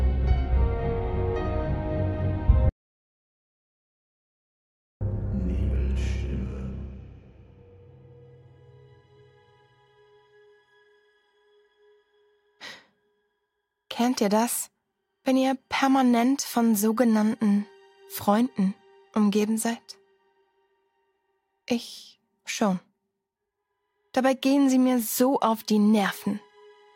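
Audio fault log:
2.69–5.01 s: audio dropout to silence. The sound cuts off mid-flow and returns abruptly after about 2.3 s of silence with no room tone, likely from the input signal being lost while recording continued and wrote silence. Everything in that gap is lost.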